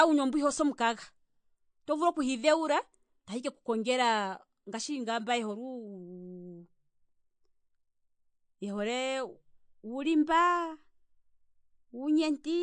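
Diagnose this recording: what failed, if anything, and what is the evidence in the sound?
Codec stage: the speech has plainly audible codec damage throughout, with nothing above 9.4 kHz. That's likely MP3 compression, cutting treble to save bits, consistent with roughly 49 kbps.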